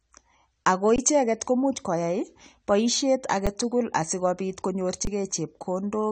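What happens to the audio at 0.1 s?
At 0.1 s, and right through the clip, the speech sounds dull and smeared, with nothing above 9 kHz and a warbly, fizzy edge on sibilants. That's likely AAC compression: a low-bitrate encoder, around 32 kbps by the sound of it, dropping the top band and thinning the rest.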